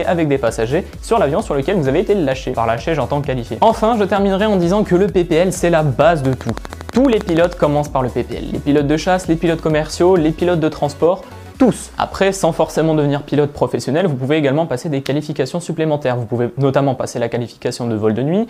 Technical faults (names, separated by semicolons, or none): train of clicks